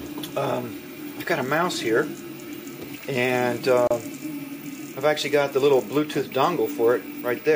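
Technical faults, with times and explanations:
3.87 to 3.91 s, gap at a join of encoded pieces: The sound drops out for about 32 ms, then resumes exactly where it left off. The edges are smeared by the codec. The audio was encoded in separate pieces, here about 4 s long, and joined without trimming. The end padding of one piece and the start delay of the next both remain, leaving this short hole in otherwise continuous sound.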